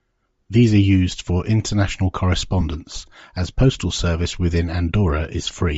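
Throughout, the speech has a plainly audible breathy, grainy edge where the upper band is replaced by noise, likely from Bluetooth LC3 compression at a low bitrate, around 32 kbps with short 7.5 ms frames. This noise-filled top sets it apart from a plain low-pass dulling. At 2.61 to 2.63 s, just after "are used for international", lost LE Audio frames are covered by the decoder repeating the last spectrum with scrambled phases. The gap is about two frames long, and the concealed noise fills it rather than leaving a dropout to silence.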